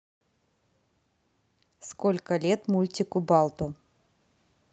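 From 2.27 s to 3.63 s the speech and the background noise behind it swell together, climbing by about 3 dB over that stretch and staying at the higher level. This is automatic gain rising: the gain control judged the input too quiet and raised its gain gradually, so everything in the signal gets louder, not just the talker. The speech also passes through a call codec, and the top end stops near 8 kHz, consistent with Opus at a modest bitrate.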